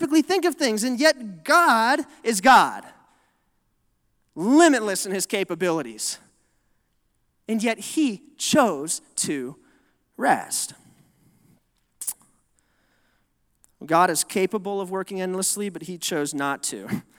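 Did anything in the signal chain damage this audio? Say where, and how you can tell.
No, nothing in this recording stood out as damage from any stage of the signal chain when I listened to it.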